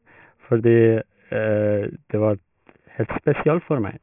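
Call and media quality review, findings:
Aliasing throughout the speech: sibilants gritty and metallic, junk folding back around the 3 kHz edge, fairly loud at roughly 15 dB under the signal. Probably a resampler dropping to about 6 kHz without an anti-alias filter, so highs reflect down.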